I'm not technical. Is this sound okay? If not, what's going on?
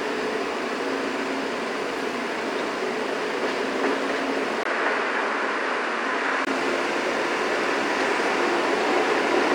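No. From 4.63 to 6.47 s there's an input switched to a poorer device, likely a different microphone taking over. After a brief gap at the switch, the sound loses its brightest top end, nothing above 11.4 kHz, and gains a faint new background noise, while loudness stays about the same.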